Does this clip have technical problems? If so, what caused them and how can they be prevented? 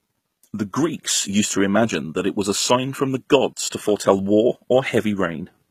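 Yes. HE-AAC compression, throughout: the treble of this speech is likely rebuilt by spectral band replication, copied up from lower bands, so s sounds turn gritty and lispy, with nothing above 14.9 kHz, which fits a bitrate around 20 kbps. Prevent it by encoding at a higher bitrate with plain AAC.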